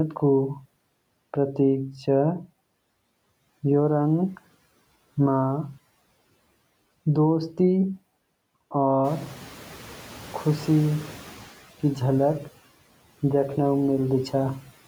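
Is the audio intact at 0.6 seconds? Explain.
No. At 0.6 seconds the speech already carries noise suppressor artifacts, which run through the whole clip. The background sinks in the gaps and swells back up beneath the speech. The suppressor judges which frequency bands hold steady noise in each short frame and pulls them down, here by about 15 dB.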